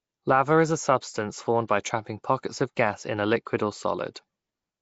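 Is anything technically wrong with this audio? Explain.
Yes. Throughout the speech, a rough, hissy halo and a smeared, underwater quality point to likely Nellymoser compression, Flash's old microphone codec. It spends a fixed two bits per sample on short blocks and fills weak bands with noise, which fits roughly 32 kbps. A spectrogram shows nothing above 7.7 kHz and noisy, speckled fill in the weak bands.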